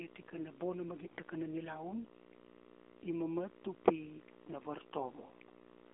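From start to finish a video or display buzz sits under the speech, a hum-like buzz at 60 Hz with hashy harmonics above it, at roughly 20 dB below the speech level. Its steadiness and harsh upper content point to a screen or video cable coupling its field-rate energy into the audio wiring, so the interference arrives at the picture rate rather than at mains frequency.

The whole clip also carries the AMR narrowband mobile codec, with plainly audible damage. The band is confined to roughly 250 Hz to 3.6 kHz, and nothing above 4 kHz survives. The speech has the buzzy, somewhat synthetic quality of a vocal-tract model driven by a few sparse pulses per subframe, which fits a low mode near 7.4 kbps, where too few bits remain to reproduce the excitation faithfully.

From 1.04 to 1.21 s, AMR bit errors break in. The voice keeps roughly its pitch and loudness but turns hoarse, scratchy and gargly for that stretch, which fits about eight frames damaged at an error rate of a few percent. 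Flipped bits in the less protected fields put the excitation pulses in the wrong positions and skew the fine gain and spectral values, while the protected core still decodes.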